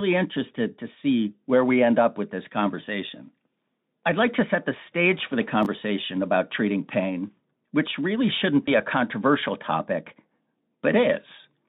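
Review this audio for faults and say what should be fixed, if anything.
From 5.63 to 5.66 s there is a short jumbled moment: chunks out of order. A 10 ms chunk plays late, about two chunks after its proper position, so nothing is lost but the sequence is scrambled and there are three hard joins. Reorder incoming chunks by sequence number in the jitter buffer before playout to prevent this.

From 8.66 to 8.72 s there is VoIP packet loss concealed by the speech codec. The gap fits a single lost 20 ms frame. The Speex decoder fills it by extending its last pitch and filter at falling gain, producing a brief buzzy tone or coloured noise that fades. Because each concealed frame builds on the previous one, the sound stays weakened until about 8.72 s. Enabling forward error correction or redundant packets on the link would prevent it.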